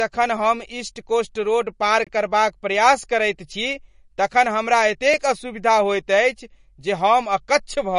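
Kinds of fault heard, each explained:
MP3 compression: The speech sounds watery and swirly from start to finish, and the damage is plainly audible. Nothing is heard above 10.6 kHz, so the top of the treble is cut off flat. That cut, together with the smeared consonants, is likely the work of an MP3 encoder short of bits. The sound points to a low bitrate, around 40 kbps. Weak frequency detail flickers in and out between frames, which blurs the sibilants and attacks.
block of digital silence: The sound drops out twice and returns with no fade. The first hole runs from 2.04 to 2.07 s, about 23 ms, just after "ईस्ट कोस्ट रोड पार" and before "करबाक प्रयास करैत छी". Its length fits a 1024-sample buffer that was not filled in time. The second, at 5.14 s after "करैत छी तखन हमरा", lasts about 1.2 ms and is heard as a tick.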